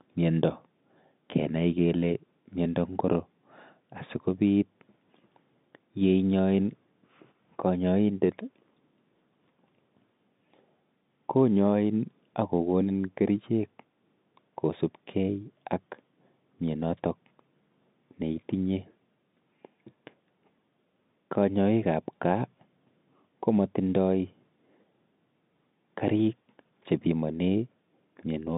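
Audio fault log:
No faults are heard in this speech clip. The sound carries the narrow band of G.711 telephone coding, with nothing below about 150 Hz or above about 3.7 kHz, which fits a 64 kbps mu-law line.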